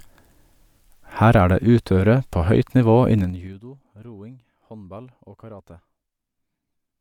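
From 3.16 to 3.63 s, zipper noise ticks through the speech. The level falls about 25 dB in unsmoothed 3 dB steps, each one clicking.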